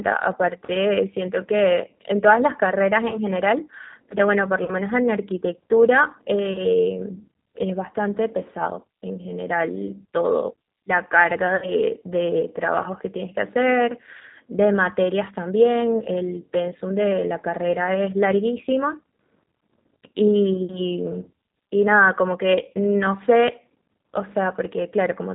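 Throughout, the G.729 codec at 8 kbit/s makes the speech rough and synthetic; the spectrogram is empty above 4 kHz.

VoIP packet loss concealed by the speech codec occurs at 3.08–3.17, 4.64–4.71, 6.53–6.58, 11.56–11.70 and 14.17–14.23 s, with 20, 40, 20, 60 and 40 ms of audio missing. The decoder stretches its last frame into a fading buzzy tone or coloured noise, which shows as smeared, flattened harmonics or noise and a shrinking waveform envelope.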